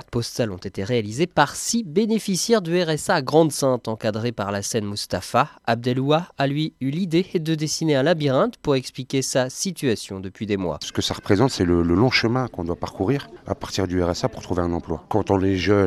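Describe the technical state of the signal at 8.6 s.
At 8.6 s the signal is intact, with no dropout, distortion, glitch or other fault audible at that point.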